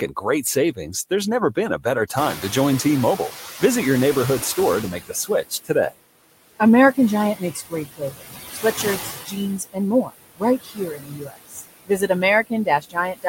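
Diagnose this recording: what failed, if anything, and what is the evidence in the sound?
Call processing failed. Noise suppressor artifacts run through the whole clip. The suppressor pulls steady noise down by about 18 dB, band by band, frame by frame. From about 2 s the room noise rises by about 22 dB, and the residue sinks between the words and rises under the speech.

Speech cut by the noise suppressor is the second fault. Speech turns faint at 0.08–0.79 s before "there's never" (about 12 dB), 4.93–5.98 s (about 21 dB), 7.35–12.1 s and 12.47 s to the end (about 20 dB). The suppressor mistook quiet speech for noise and turned it down.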